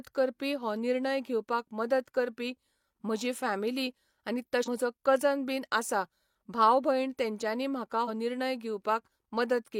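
Two brief disruptions break into this speech clip, one from 4.63 to 4.68 s and another from 8.04 to 8.09 s, each lasting about 50 ms. Both are caused by damaged data in a compressed stream. At those points the coded bytes were corrupted, so the decoder could not read the affected frames correctly, lost its frame alignment and had to search for the next valid header. The garbled output during that recovery is what produces the disruptions.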